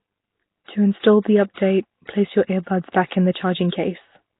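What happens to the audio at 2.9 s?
Between 2.92 and 2.94 s, after "place your earbuds" and before "back in the", there is pre-echo. The codec spreads quantisation noise across its block, so a short hiss leads the attack by about 24 ms, unlike a click, which sits on the attack itself. The rough, hissy, underwater colouring with nothing above 3.8 kHz, present throughout the clip, is likely Nellymoser compression, heavily damaged and consistent with a rate of roughly 16 kbps.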